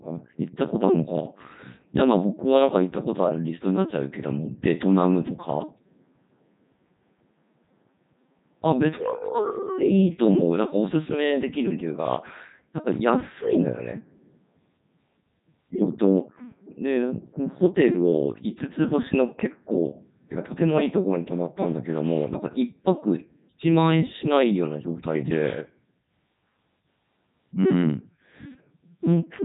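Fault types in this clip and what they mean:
Codec 2 vocoder: throughout the speech, the voice comes out robotic and buzzy because the decoder rebuilds it from sine waves driven by sent pitch, voicing, energy and spectral-envelope values rather than from the original waveform. The heavy damage here fits the 3.2 kbit/s mode, the codec's highest rate, and nothing is heard above 3.8 kHz, so the top of the speech band is missing.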